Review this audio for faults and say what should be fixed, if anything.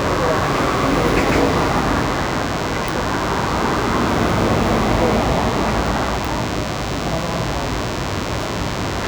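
The audio circuitry rectifies a nearby DECT phone's 10 ms radio bursts, causing DECT cordless phone buzz: a thin 100 Hz drone about 10 dB below the signal throughout. Move DECT handsets and base stations well away from the recording chain, and use shielded, well-grounded cabling.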